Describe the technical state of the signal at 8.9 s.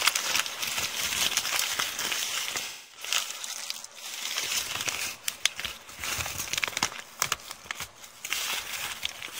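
At 8.9 s the signal is intact, with no technical fault audible at that moment.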